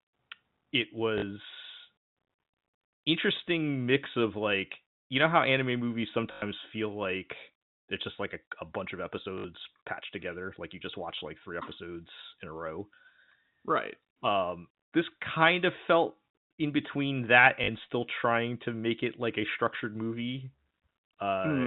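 A speech clip with four brief robotic stutters from packet loss with the last packet repeated: 1.18 to 1.22 s, 6.32 to 6.42 s after "know how anime movies", 9.38 to 9.44 s, and 17.64 to 17.68 s. Each gap is filled by replaying the previous chunk, and the 0.1 s one buzzes in a way that fits 20 ms packets.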